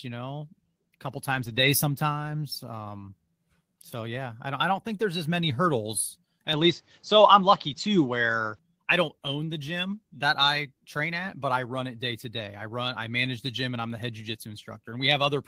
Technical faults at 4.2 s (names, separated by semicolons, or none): none